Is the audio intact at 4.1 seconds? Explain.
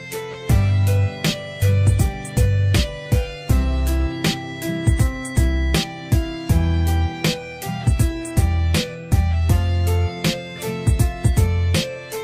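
Yes, at 4.1 s the audio plays through cleanly, with no dropout, click, distortion or other break at that moment.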